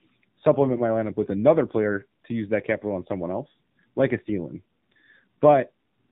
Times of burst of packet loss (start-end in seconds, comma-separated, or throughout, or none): none